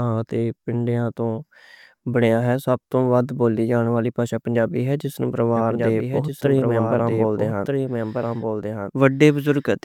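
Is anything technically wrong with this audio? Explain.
Yes. From 5.56 s to the end, the speech is joined by a second copy of itself trailing about one and a half seconds behind and a few decibels quieter. The copy cuts in abruptly, with no decay or room colour, so two overlapping passes run together. This is a doubled audio track, likely from the signal being captured twice, once through a slower path, or from an edit that left two unaligned copies stacked.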